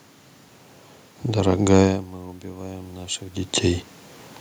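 Around 2 s the talker moves off the mic and the input drops by about 17 dB. From 2.41 to 3.9 s you get automatic gain rising: the AGC eases its gain up by about 4 dB, so voice and room noise swell together.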